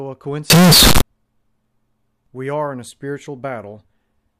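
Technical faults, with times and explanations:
0.5–1.01 s, float read as integer: the sound jumps to a very loud, harsh square-like wave at an almost fixed, high level, with background noise as loud as the rest. This is likely 32-bit float samples read as 32-bit integers. The waveform shows a flat-topped block, and the spectrogram shows dense broadband energy.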